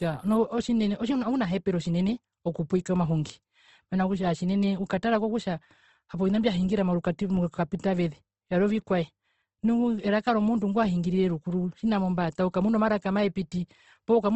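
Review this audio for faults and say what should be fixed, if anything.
Throughout the speech there is plainly audible codec damage: the voice sounds grainy and rough, with noisy texture where tonal detail should be, and nothing is present above 12 kHz. This is likely Opus compression in its music (CELT) mode, which preserves each band's energy but fills starved bands with folded or noise-like content, so the result is roughness rather than swirling. The degree of damage fits a bitrate around 16 kbps. To prevent it, encode from the original source at a higher Opus bitrate.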